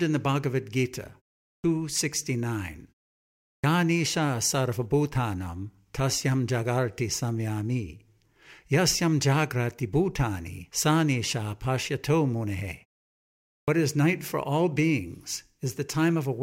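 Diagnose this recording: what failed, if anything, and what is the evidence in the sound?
The failure is at playback: a clipped start after a pause. Speech resumes abruptly out of silence at 1.59 s, 3.58 s and 13.63 s, just before "is night for all". Each onset loses its first sounds, about 50, 57 and 48 ms. The preceding pauses last 0.46, 0.73 and 0.86 s. The output device sleeps during those gaps. It needs a moment to wake and lock again, so the start of each phrase is swallowed.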